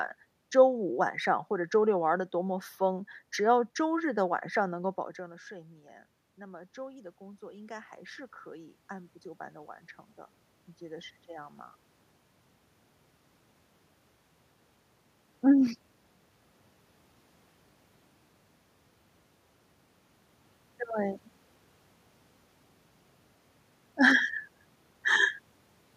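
From 4.64 to 11.65 s the automatic gain rises: after the speech input drops by about 17 dB, around when the talker moves back near 5 s, the gain control slowly lifts its level by about 8 dB. Unlike a talker simply moving, the room noise swells along with the voice.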